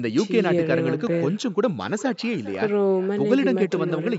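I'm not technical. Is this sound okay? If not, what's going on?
No. There is an echo with no canceller through the whole clip. The speech returns about 0.4 seconds later as a quieter, hollow copy.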